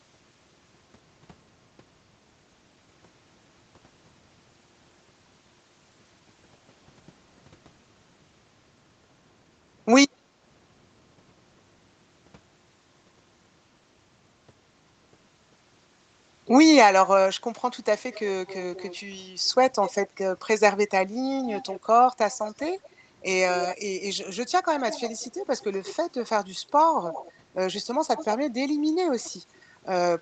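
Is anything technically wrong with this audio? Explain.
Yes, there are two faults in this speech clip.

From 10.13 to 10.33 s there's background gated by the echo canceller. For about 200 ms the room sound dips by up to about 9 dB and then comes back. The canceller clamped down on the mic while it thought the far end was playing through the loudspeaker, so the ambience briefly sinks out and snaps back when it releases.

Later there's an echo leak, with a delayed copy of the speech trailing the original by roughly 184 to 189 ms. It shows up at 17.98–20.09 s, 21.43–22.89 s, 23.56–23.77 s, 24.79–25.96 s, 27.07–27.32 s, 28.16–28.27 s and 29.21–29.62 s. Its level varies from around 10 dB below the speech down to around 30 dB below. The likely cause is a speakerphone on the other end whose echo canceller didn't fully scrub what its mic picked up from its own loudspeaker, so that residue got sent back down the line.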